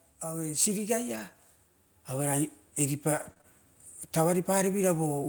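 At 1.15 to 1.21 s comes a lost packet rebuilt from error correction. About 40 ms plays from a low-bitrate backup copy, so it sounds rougher and noisier, with no gap. From 3.17 to 3.46 s, repeated packet loss gives a choppy, robotic sound. Three short holes, the longest 23 ms, are patched by stretching the previous sound. From 4.17 s to the end, automatic gain rises. The control judged the input too quiet, so speech and background swell together gradually.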